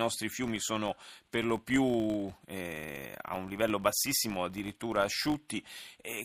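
Right through the speech there's a steady 50 Hz buzz that swells and fades with the talking level. That's a filter restarted on every block: it drops its state each time and starts from silence, so every block opens with a tiny tick. A 50 Hz rate fits blocks about 20 ms long.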